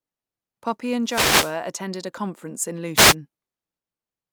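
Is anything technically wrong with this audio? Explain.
Yes. There are two wireless microphone noise hits in this speech, from 1.04 to 1.58 s, just before "attended a conference in", and from 2.95 to 3.15 s, right after it. Reflected radio paths cancel, the FM signal fades, and receiver noise surges as a swish of static over the voice, unlike a digital dropout's clean silence.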